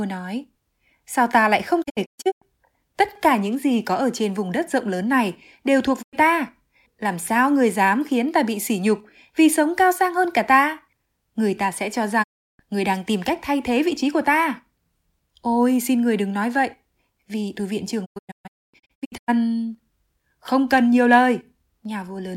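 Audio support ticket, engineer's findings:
Digital broadcast dropout, four events: 1.82–2.44 s, 6.01–6.15 s, 12.22–12.61 s, 18.04–19.30 s. Speech mutes behind 20 ms fades. First and last events split into several holes, longest 0.13 s and 0.26 s. Receiver muting on bad frames. Programme audio lost, not delayed.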